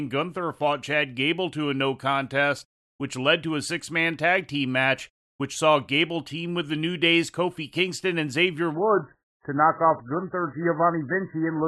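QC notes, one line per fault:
8.74 to 11.67 s, adaptive stream at a lower bitrate: the speech abruptly turns dull and smeared, with no gap, because the stream switched to a much lower-bitrate rendition when the connection slowed, which points to a step from around 128 kbit/s MP3 down to roughly 8 kbit/s. Nothing survives above 2 kHz, so sibilance vanishes and a watery, warbling codec texture appears. On a spectrogram the upper bands cut off sharply at 2 kHz right at the switch point.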